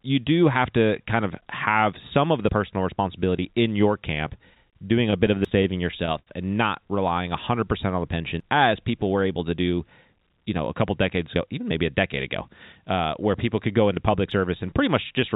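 At 2.49 s, between "have some of the" and "responsibility in your", there's a small skip where a sliver of speech just vanishes and the two sides butt together with no silence. That's audio missing between chunks, most likely from the recorder or processor handing off from one block to the next and dropping a few tens of milliseconds in the changeover. The same skip comes back at 5.45 s, 8.40 s and 14.31 s, the last right after "could go into public". The spacing of roughly three seconds between the early ones fits a 3-second chunk size.

At 4.70 s there's a short stall from a late packet. A packet didn't show up on time, the jitter buffer ran dry, and the receiver held the last sound for about 28 ms until it arrived. Nothing is lost, but the sound hangs slightly too long with a faint buzzy smear, and the playout ends up about 28 ms further behind.

From 5.11 to 6.29 s it gets choppier. 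This is repeated stalls, a stutter. Packets kept running late, so the buffer emptied nine separate times. Each time the receiver stretched the last bit of sound to cover the wait, the longest gap being 74 ms. About 163 ms in total, roughly 13 percent of that stretch, is filled-in sound, so the speech drags and stumbles without anything going missing. The 5.45 s chunk skip falls inside this stretch.

Between 7.13 and 7.92 s the jitter buffer slow-down kicks in. To build up a reserve, the receiver repeated tiny pitch-period-sized slices over and over, adding about 72 ms. The speech runs at about 92 percent of normal speed with the pitch unchanged, so it comes across as slightly drawn out.

From 9.79 to 11.58 s, starting after "people were able to" and running up to "maybe a decade ago", it goes the other way with a jitter buffer speed-up. The buffer was holding more than it wanted, so the receiver trimmed out short pitch-length pieces, around 150 ms in all. 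The talking runs at about 108 percent speed, same pitch, and feels a bit rushed.

Throughout, the call path itself is audible in the band limit, with nothing above 4 kHz, which fits a narrowband call codec.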